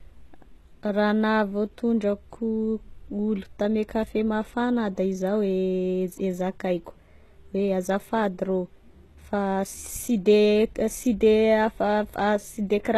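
From start to finish the speech carries plainly audible HE-AAC compression: treble rebuilt from copied lower bands, so s sounds go gritty and lispy, with nothing above about 12.3 kHz. That low-bitrate codec is the likely cause.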